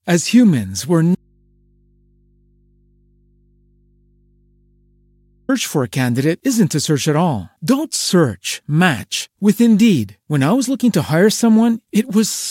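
An audio dropout to a faint residue runs from 1.15 s to 5.49 s. The speech cuts out abruptly for 4.3 s, leaving only mains hum roughly 40 dB below the signal, most likely because the source feed was lost while the downstream input stayed live and open.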